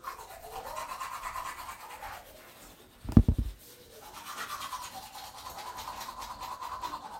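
From 0.11 s to 7.18 s, faint clock slip clicks tick through the sound about every 30 ms. They merge into a soft, steady rattle. Each slip drops or repeats one sample. The likely cause is two unsynchronised clocks drifting apart by roughly 700 ppm.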